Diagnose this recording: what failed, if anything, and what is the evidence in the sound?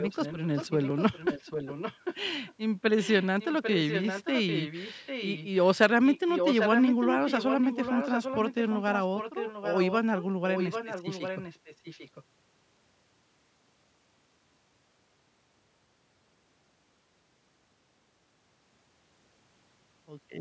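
The failure is at the call-processing stage, and it sounds like echo leak. A delayed copy of the speech trails the talker by about 800 ms during 0–2.16, 3.0–5.48, 6.06–8.54, 8.7–9.94 and 10.51–12.24 s, with a faint scrap at 2.46–2.54 s. It's mostly about 10 dB down, only about 5 dB down around 6–8.5 s, and barely there in that scrap. The likely cause is a far-end speakerphone whose echo canceller let its mic pickup through. The speech's top end stops around 8 kHz.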